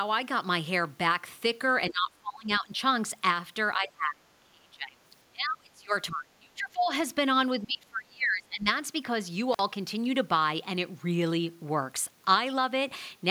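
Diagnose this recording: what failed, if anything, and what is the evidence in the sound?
Call processing is at fault. The speech drops away at 1.88–2.73, 3.75–4.97, 5.27–5.93, 6.11–6.91 and 7.60–8.67 s, by about 25 to 30 dB. This is likely speech suppressed in double talk. The echo canceller mistook the talker for echo and turned it down.

The analogue wiring failed briefly. At 9.53 to 9.59 s the sound cuts out for about 46 ms, with crackle at each edge. This is an intermittent contact. A loose cable or plug opened the circuit, then closed it again.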